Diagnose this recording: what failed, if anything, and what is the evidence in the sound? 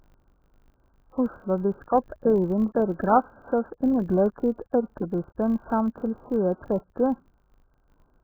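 Across the whole recording the speech is dull and muffled, so sibilants and consonant detail are smeared and vowels carry a smeared, warbling texture. The damage is heavy and uniform, pointing to the codec stage. The likely cause is AAC compression, AAC-LC at a very low bitrate, consistent with about 8 kbps. At that rate the encoder lowers its cut-off drastically and quantises the remaining frequency lines so coarsely that the spectrum turns grainy and unstable.

A steady buzz at 50 Hz also runs under the speech from start to finish, and it grows and fades with the level of the talking. This is a filter restarted on every block, a fault in the block-based processing stage. The filter drops its internal state at each block boundary and starts from silence, so every block opens with a small transient. Repeating 50 times a second, these merge into a buzz, which fits 20 ms processing blocks.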